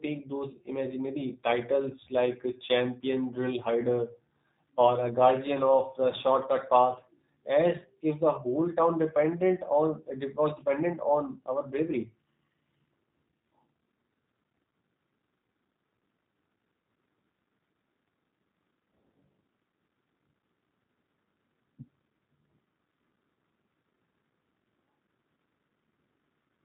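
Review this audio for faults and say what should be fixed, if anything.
G.729 codec damage runs through the entire clip: the speech is modelled as a filter plus pitch and a few pulses, so it sounds plainly rough and synthetic, which fits 8 kbit/s G.729A. A spectrogram shows a flat ceiling near 3.8 kHz with nothing above it. Carry the call on a wideband codec such as Opus instead of G.729.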